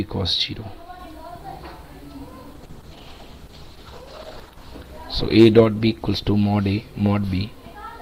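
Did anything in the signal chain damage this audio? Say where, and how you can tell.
Yes. A call bitrate drop sets in at 2.58 s and lasts to the end of the clip. It is damage at the codec stage, triggered by the call's bandwidth estimate falling. The texture roughens and the top end dulls as the encoder is starved of bits. The sound goes from full-band to coarse, watery and band-limited, which fits a fall from around 128 kbps to roughly 11 kbps. It stays at its worst for about 1.9 s.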